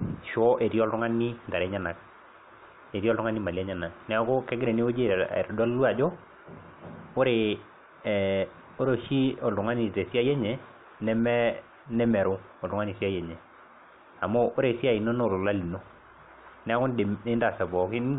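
No technical faults are audible.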